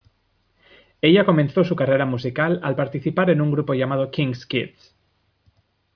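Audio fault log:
Nothing stood out on listening to this speech recording.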